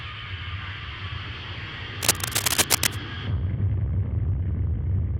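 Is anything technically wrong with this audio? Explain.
Yes. From 2.02 to 2.96 s there's cable scratch noise, a dense, uneven rustle sitting a bit above the sound, most likely from a worn cable or connector shifting contact.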